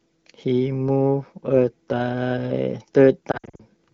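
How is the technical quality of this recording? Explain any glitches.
The recording has one clear glitch near the end, from lost AMR speech frames; the AMR wideband (HD Voice) coding throughout adds only light coloration, consistent with a mid-rate mode around 16 kbit/s.

Lost AMR speech frames, 3.31 to 3.62 s: about 180 ms of frames went missing, scattered over roughly 280 ms, with the longest gap 60 ms. The decoder bridged each gap by repeating the last good frame's settings at decaying gain, so the speech warbles and dips.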